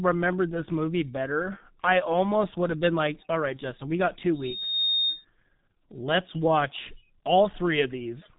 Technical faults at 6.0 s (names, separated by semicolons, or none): G.723.1 codec